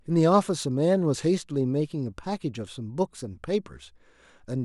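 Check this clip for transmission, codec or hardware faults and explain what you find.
One fault is present: clock slip clicks from 0.12 s to 4.62 s. Two devices likely run on unsynchronised clocks roughly 700 ppm apart, so a single sample is dropped or repeated about every 30 ms, leaving a soft, steady rattle through the speech.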